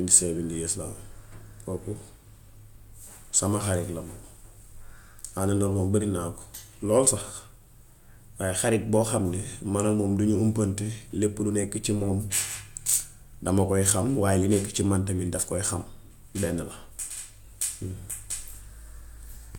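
No technical faults can be heard in this recording at any point.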